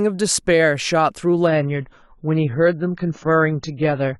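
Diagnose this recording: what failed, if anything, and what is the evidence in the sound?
At 1.47 s the speech turns abruptly dull and smeared, with nothing above 7 kHz through to the end: an adaptive stream at a lower bitrate, a network-driven codec switch whose artefacts suggest a low AAC rate near 16 kbit/s. Unlike packet loss, there is no gap or glitch, just a sustained quality step.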